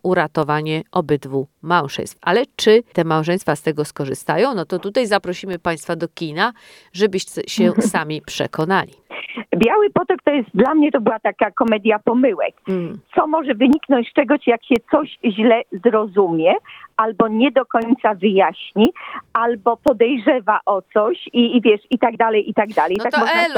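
Periodic USB or driver dropouts repeat every 1.02 s from 0.43 to 22.96 s, each blanking about half a millisecond to silence, heard as regular ticks.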